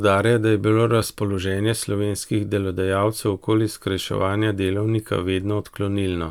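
No technical faults can be heard anywhere in this speech.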